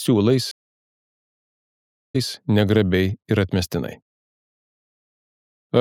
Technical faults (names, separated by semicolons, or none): stream reconnect